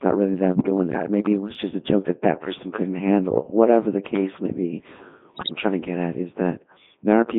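The whole clip has passed through a Codec 2 vocoder, most likely its 3.2 kbit/s mode. Only pitch, voicing, energy and a spectral envelope survive, and the speech is rebuilt from sine waves within roughly 150 Hz to 3.6 kHz, so it sounds heavily robotic and buzzy.

Bit errors on digital voice radio strike from 0.53 to 0.70 s, after "not really", and again from 5.34 to 5.55 s, between "the case may be" and "trying to get at". Around 7 percent and then a tenth of the bits flip across what sounds like eight frames each time, scrambling pitch, level and tone colour into warbling, bleeping gibberish.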